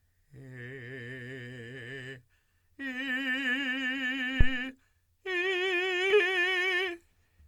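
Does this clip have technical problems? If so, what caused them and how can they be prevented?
Yes: a phantom power thump at 4.41 to 4.55 s. A supply switched on or off on a live input pushed a step through coupling capacitors, seen as a low-frequency waveform swing and spectrogram smear. Switch phantom power only with the channel muted.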